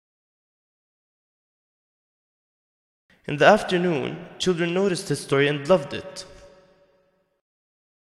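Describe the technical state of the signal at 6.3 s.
At 6.3 s the signal is intact, with no audible fault at that moment.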